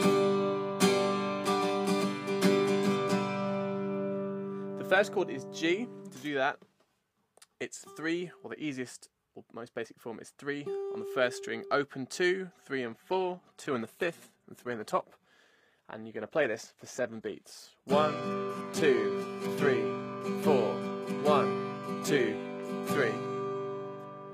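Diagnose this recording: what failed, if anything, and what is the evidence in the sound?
At 12.86 s the audio abruptly loses quality, with no gap or dropout, and stays degraded to the end: coding artefacts become more audible and nothing remains above 14.9 kHz. This is an adaptive stream at a lower bitrate, a network-stage fault. When throughput fell, the player switched to a lower-quality rendition of the same stream. The sound points to a move from a mid-rate AAC encoding to a very low-rate HE-AAC one.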